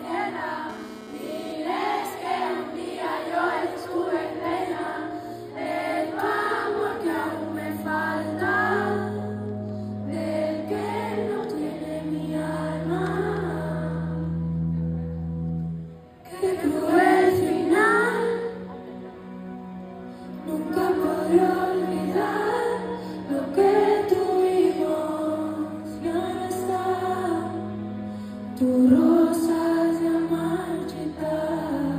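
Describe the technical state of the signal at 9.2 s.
At 9.2 s the signal is intact, with no dropout, distortion, glitch or other fault present.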